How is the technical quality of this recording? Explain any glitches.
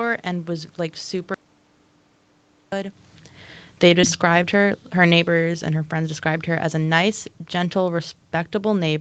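The recording has three glitches: a full dropout, a gradual gain reduction, and a brief concealed packet loss, all carried over a call path whose codec tops out at 8 kHz.

From 1.34 to 2.72 s, just after "and was like", the input was lost for about 1.38 s, likely through a disconnected device, failed link or stray mute, and silence was written instead. This is an audio dropout to silence: the speech stops abruptly, the gap is dead silent with no room tone, and that stretch of speech is gone.

From 3.68 to 8.06 s, automatic gain falling occurs. The gain control judged the input too loud or its background noise too strong and pulled its gain down by about 7 dB. The speech and its background noise sink together. The talker shifting position near 3.0 s is a separate, natural level change.

Between 4.01 and 4.18 s there is a short concealed packet loss. About 20 ms of audio missed the decoder, and the receiver filled the hole by extending the preceding sound before blending back. 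It comes through as a brief smear or wobble in the speech.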